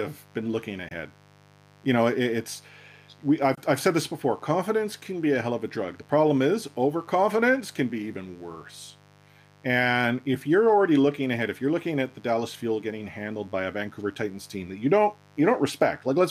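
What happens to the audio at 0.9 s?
At 0.88 to 0.91 s the speech cuts to silence, then resumes further along, as if it had kept playing during the gap. This is a Bluetooth dropout, likely caused by a packet that reached the headphones too late and was discarded; the roughly 20 ms hole fits a single lost packet.

A steady, raspy 50 Hz mains buzz also runs under the speech at this moment, about 30 dB below the signal. Switching spikes twice per mains cycle produce harmonics reaching into the kilohertz range.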